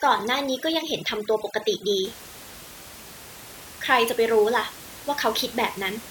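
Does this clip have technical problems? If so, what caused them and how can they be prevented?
Yes. Overdone noise removal affects the speech from 0.0 to 2.05 s. The background drops and breaks up into small twinkling specks. A noise reduction stage was set too strong. It pushed individual frequency bands far down whenever they came close to its noise estimate. The quiet parts of the voice were cut with them. After 2.05 s the room noise returns, about 18 dB below the speech. To prevent it, use gentler reduction settings and check the result by ear.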